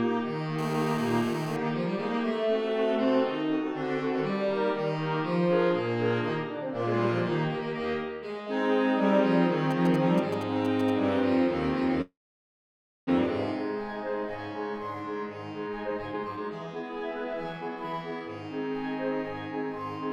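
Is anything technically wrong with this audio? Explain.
Yes, there are four distinct problems, all typical of phone or network audio.

From 0.59 to 1.57 s there's GSM phone buzz: a hard, raspy buzz at 217 Hz, full of harmonics and sitting about 11 dB below the wanted sound. A 2G handset on a call nearby transmits in bursts 217 times a second. Some stage of the audio circuit rectifies those radio pulses into the signal, so the buzz has nothing to do with the content and stays steady through the whole stretch.

Between 9.71 and 10.90 s you get GSM signalling bursts instead: a galloping dit-dit-dit of short 217 Hz buzzes, roughly 10 dB down. Here the phone is only sending brief groups of bursts, the way it does just before a call or text comes in. The same rectification turns each group into a little clump of buzz, which gives it that stuttering rhythm rather than a continuous drone.

At 12.01 s there's a call audio freeze lasting until 13.09 s. 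The last bit of sound is stretched into a fading buzz, then about 0.95 s of near-silence follows, and the audio picks up exactly where it left off. Nothing is lost. Instead, roughly 1.06 s of gap has been inserted. The likely cause is packets held up in transit, so the jitter buffer ran dry and the receiver filled the wait.

From 15.67 to 18.30 s the jitter buffer speed-up kicks in. The audio runs at about 139% of normal speed with pitch unchanged, so it sounds rushed and crammed together. With a backlog of delayed audio to clear, the receiver snips out short pieces of one or a few pitch periods over and over, and around a second of material disappears to bring the delay back down.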